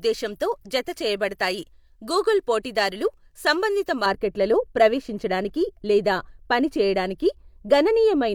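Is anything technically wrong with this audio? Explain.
Yes. From 4.06 s to the end, the speech has a de-emphasis fault: a treble-cut filter intended to reverse pre-emphasis has been applied where no matching boost existed, or applied a second time. The result is a smooth downward tilt across the upper spectrum, about 11 dB lower at 10 kHz than at 1 kHz. Consonants and sibilance lose their edge, and the sound turns noticeably dull and muffled compared with the first four seconds.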